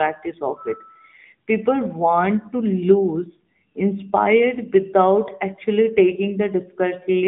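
From start to finish the speech has been through the AMR narrowband mobile codec, likely at around 10.2 kbps. It passes roughly 150 Hz to 3.6 kHz, with nothing above 3.8 kHz, and the coding sounds plainly buzzy and synthetic.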